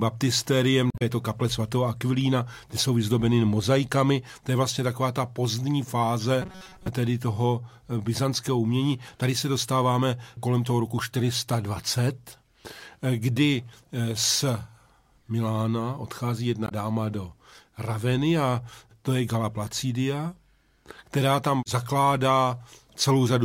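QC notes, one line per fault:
0.90–1.02 s and 16.65–16.72 s, damaged data in a compressed stream: the decoder hits corrupted frames, loses sync and resynchronises each time.
6.42–6.88 s, robotic sound from repeated short buffers: a rigid, metallic buzz near 188 Hz, likely from a 5.3 ms chunk being looped while most of the real audio there is dropped.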